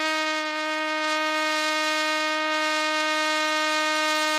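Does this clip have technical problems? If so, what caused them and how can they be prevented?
Yes. The music was likely squeezed through Opus compression at a low rate, which fits about 24 kbps in its music mode. Bands are refilled with folded or noise content, so tones throughout turn plainly grainy, rough and noisy. Encoding at a higher bitrate would prevent this.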